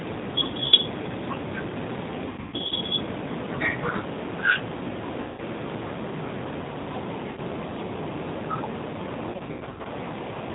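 A speech recording carried over the G.729 codec at 8 kbit/s, with plainly audible coding damage throughout: nothing above 4 kHz survives, and the voice has the slightly rough, synthetic texture of a signal rebuilt from a vocal tract filter, a pitch predictor and a sparse pulse excitation rather than from the original waveform. On top of that there are five episodes of VoIP packet loss concealed by the speech codec. The shortest, at 0.66 to 0.74 s and 7.31 to 7.40 s, each replace about 60 ms of audio. At 5.20 to 5.41 s about 180 ms is lost. The two worst are scattered: 2.29 to 2.73 s loses about 300 ms spread over 420 ms, with the longest gap 120 ms, and 9.31 to 9.88 s loses about 360 ms over 540 ms, with the longest gap 90 ms. In each gap the decoder keeps repeating its last pitch and filter while the level drops, so the sound smears into a fading buzz or coloured noise. Because each frame is predicted from the one before, the speech stays weak or distorted for a short while after real audio resumes.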